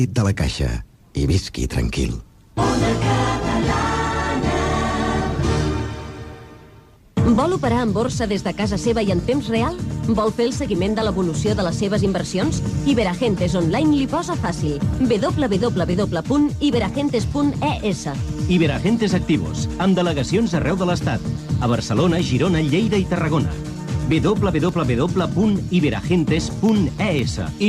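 From 21.19 to 27.19 s, regular ticks sound every 0.5 s: periodic USB or driver dropouts, where tiny slivers of audio are briefly replaced by silence.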